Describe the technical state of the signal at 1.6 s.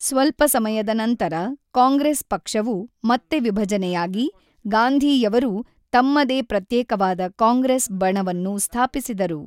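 At 1.6 s the speech signal is intact, with no dropout, clipping, distortion or other technical fault.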